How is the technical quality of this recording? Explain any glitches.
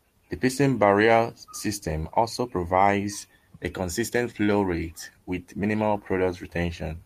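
No glitches to report: nothing in the recording points to a technical fault.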